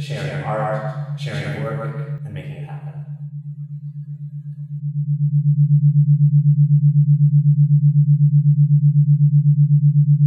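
A doubled audio track runs from the very start of the clip until 2.18 s: a second, full-band copy of the same audio trails the original by roughly 150 ms at about equal loudness, with no decay or room colouring, and stops abruptly. This is likely a second capture through a slower path, or an edit holding two copies out of step.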